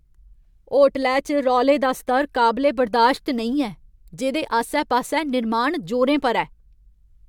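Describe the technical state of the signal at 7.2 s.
At 7.2 s the speech signal is intact, with no audible technical fault at that moment.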